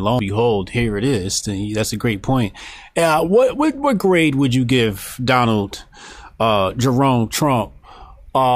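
No technical faults can be heard anywhere in the recording: the signal holds steady throughout, with its level, continuity and timing all intact.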